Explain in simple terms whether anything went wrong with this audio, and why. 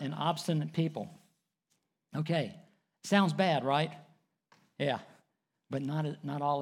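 Nothing went wrong; the speech has no audible faults.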